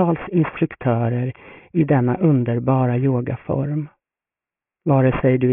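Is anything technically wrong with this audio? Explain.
Yes. Aliasing runs throughout: content above 3 kHz folds back as gritty, metallic tones roughly 20 dB down, which fits an unfiltered drop to a 6 kHz rate. On a spectrogram, energy is packed hard up to the 3 kHz edge.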